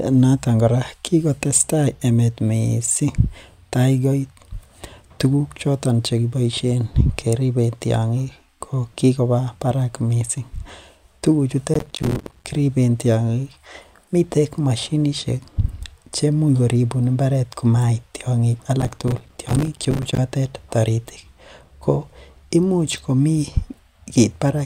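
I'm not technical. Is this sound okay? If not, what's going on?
No, there's processor overload crackle from about 11.74 to 12.47 s and 18.80 to 20.18 s, where the computer fell behind and dropped dozens of tiny slices of sound, leaving gritty crackling.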